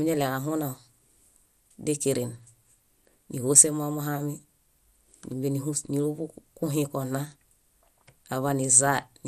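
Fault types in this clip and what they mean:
MP2 compression: dull, gurgling and granular throughout the speech, with upper bands flickering away, likely from MPEG Layer II coding at a rate around 80 kbps, too low.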